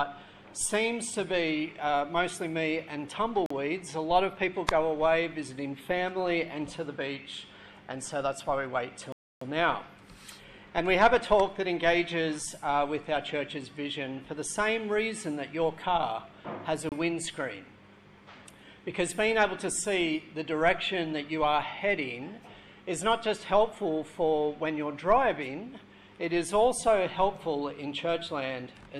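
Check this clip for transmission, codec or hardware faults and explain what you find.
Three short dropouts to dead silence, at 3.46 to 3.51 s (about 43 ms), 9.12 to 9.42 s (about 291 ms) and 16.89 to 16.92 s (about 28 ms), each with the sound carrying on afterwards. That pattern is likely a Bluetooth stall: radio interference delays packets, the headphones' buffer empties, and playback simply halts until retransmitted data turns up. The longer gap at 9.12 s is the longest, while the other two are brief ticks of silence.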